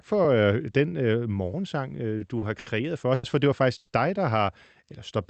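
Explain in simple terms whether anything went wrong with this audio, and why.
A short stall from a late packet happens four times in this speech, at 2.17, 2.38, 2.59 and 3.14 seconds. Each time a piece of audio arrived late, so the receiver stretched the last sound for 30, 30, 70 and 90 ms, then carried on with nothing lost.

A call audio freeze follows from 3.77 to 3.91 seconds. The sound hangs as a fading buzz or hiss for about 110 ms before resuming where it stopped, likely because packets were held up on the network and the receiver's buffer ran empty.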